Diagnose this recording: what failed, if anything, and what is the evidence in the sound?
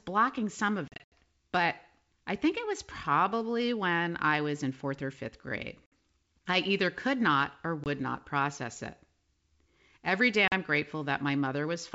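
Network stage, and it's packet loss on an ADPCM call, carried over otherwise clean-sounding G.722 at 64 kbit/s. There are hard-edged silent holes: a broken patch from 0.88 to 1.12 s between "some of" and "but I think it" (about 160 ms missing, longest gap 80 ms), then 5.86 s after "fourth or fifth grade", 7.84 s after "either could not or", and 10.48 s. Each gap leaves the decoder's predictor and step size out of step, so the audio comes back slightly distorted before settling.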